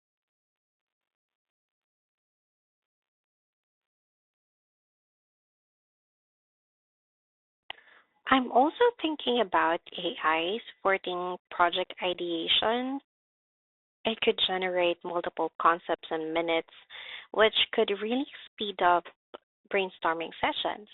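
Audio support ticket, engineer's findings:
Bluetooth CVSD headset codec, throughout. Band held to roughly 300 Hz–3.7 kHz, nothing above 4 kHz, with granular hiss beneath and scratchy sibilants. Points to a 64 kbit/s CVSD link. Unlike plain band-limiting, the one-bit adaptive step overloads on loud high content and distorts it.

Unconcealed Bluetooth headset packet loss at 12.13 s, just after "supporting project". A 15 ms hole with hard edges, silence or an idle pattern filling it, about two packets' worth. Unlike a gate or VAD dropout, the cut is abrupt and sits inside ongoing speech, with no concealment smoothing it over.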